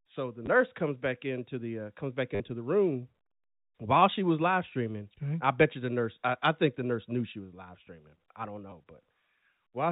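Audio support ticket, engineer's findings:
Packet loss with last packet repeated. 0.46 s, 20 ms, just before "comes back into the": 2 packets replayed. 2.35–2.40 s, between "the uh comes back" and "the room": 50 ms robotic stutter, buzz near 100 Hz, which fits 10 ms packets. 8.70 s, 20 ms, after "live streaming I don't": 2 packets replayed. Receiver-side concealment replaying the last packet. Distinct from a plain dropout: the gap is filled by repeated sound, not silence. Band tops out at 4 kHz, consistent with the G.711 telephone path.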